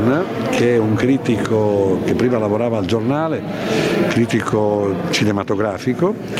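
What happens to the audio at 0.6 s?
At 0.6 s the sound is caught in gain pumping, which runs through the whole clip. The gain swings by around 20 dB, likely a fast limiter or compressor pulling it down on every loud sound after input gain set far too high. Unlike a noise gate, the background never drops to silence.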